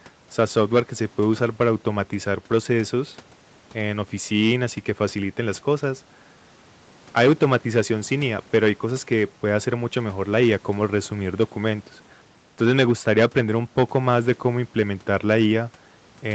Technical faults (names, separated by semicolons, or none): none